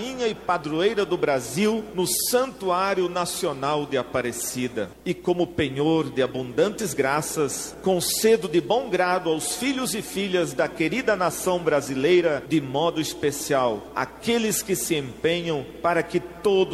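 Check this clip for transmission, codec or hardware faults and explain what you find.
Checking this clip turned up nothing to explain, as there are no faults to report.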